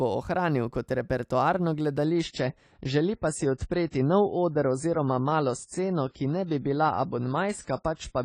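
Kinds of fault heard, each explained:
Adaptive stream at a lower bitrate: right after "bo ohranil kot repertoarno", at about 2.05 s, the speech abruptly gets duller and more processed, with no gap, and it stays that way to the end. The player has evidently switched to a cheaper rendition when the connection slowed. Everything above 10 kHz is gone, and the codec smearing and swirl that come in point to a drop from roughly 96 to 24 kbit/s AAC.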